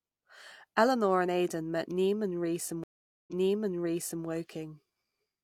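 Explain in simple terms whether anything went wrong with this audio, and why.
At 2.84 seconds the speech stops for about 0.44 seconds. This is a stream reconnect. The connection dropped, and the player rejoined. When sound returns, it starts about one second earlier, so a short stretch repeats. The disturbance ends by 4.25 seconds.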